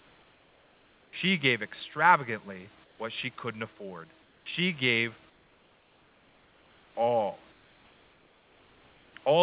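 The sender likely stops transmitting during pauses in the speech, and the receiver fills each gap with comfort noise in place of the background. This happens from 0.00 to 1.13 s, 2.84 to 2.99 s, 4.22 to 4.46 s, 5.30 to 6.95 s and 7.52 to 9.14 s. In each stretch the real room hiss, already about 36 to 38 dB below the loud parts, turns into a smooth, featureless noise about 3 to 4 dB quieter, band-limited like the rest of the call to nothing above 4 kHz.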